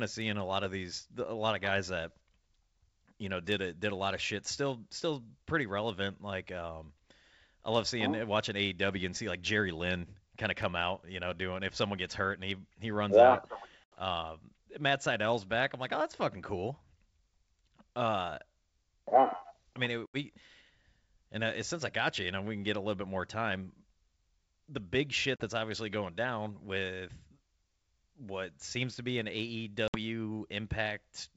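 At 13.84, 20.06, 25.36 and 29.88 s, packet loss on an ADPCM call cuts 80, 80, 40 and 60 ms holes in the speech. The waveform drops abruptly to flat silence. After each gap the predictor has lost track, so the speech resumes slightly distorted until it resettles.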